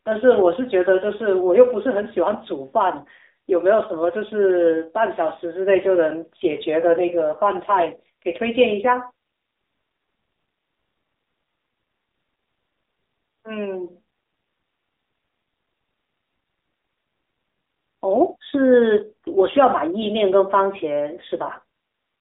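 From start to finish the speech carries AMR narrowband mobile codec damage: nothing survives below 250 Hz or above 3.7 kHz, and the voice turns buzzy and synthetic, which fits a low rate near 7.4 kbps. That modelled buzz separates it from a simple telephone band-limit filter.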